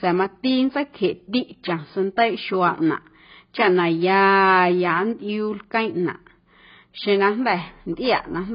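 Speech, with heavy AAC compression damage running through the whole clip. Nothing is present above about 5.1 kHz, so the top of the spectrum is simply missing and consonants lose their edge. Sibilants turn fizzy, and sustained vowels warble where the encoder leaves gaps between bands or fills them with substitute noise. The likely cause is AAC-LC encoding at a very low rate, which fits a bitrate around 16 kbps.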